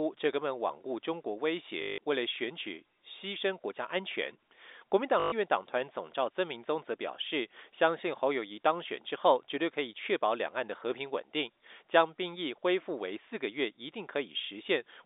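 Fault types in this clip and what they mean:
Packet loss with last packet repeated: packets went missing and the receiver replayed the last good one, 160 ms at 1.82 s and 120 ms at 5.2 s. Joins miss the pitch cycle, so each gap buzzes robotically near 50 Hz, fitting 20 ms packets.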